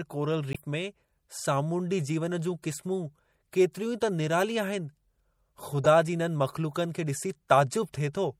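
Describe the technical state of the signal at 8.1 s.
At 8.1 s the speech carries the same damage heard throughout: a watery, swirly texture with smeared attacks. Likely cause: MP3 compression at a low bitrate, consistent with 64 kbps. Starved of bits, the encoder drops weak frequency lines.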